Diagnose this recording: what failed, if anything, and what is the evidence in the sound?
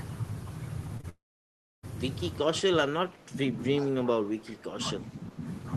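Network stage: short concealed packet loss at 0.97 and 1.01 s. Two back-to-back 20 ms gaps were patched by extending the previous sound, leaving a brief smear.

Network stage again. From 1.09 to 1.85 s the sound fades into near silence. It then resumes with material missing. The likely cause is a long network dropout.

Call processing stage. The speech dips at 2.42 to 3.57 s, 3.79 to 4.78 s and 5.09 to 5.41 s, by about 20, 15 and 10 dB. This is likely speech suppressed in double talk by the echo canceller.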